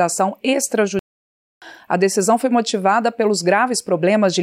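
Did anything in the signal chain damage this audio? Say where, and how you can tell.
Yes: a playback stall cuts the sound to silence from 0.99 to 1.62 s, about 630 ms, before it resumes, likely a starved or blocked player buffer.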